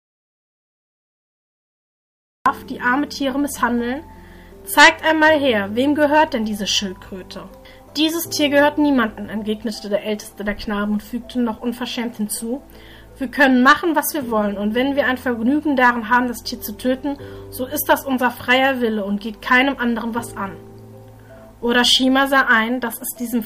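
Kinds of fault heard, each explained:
Audio dropout to silence, 0.00 to 2.46 s: the clip opens in silence with no room tone, the input likely lost through a disconnected device or failed link while silence kept being written, and the sound arrives abruptly at 2.46 s mid-flow.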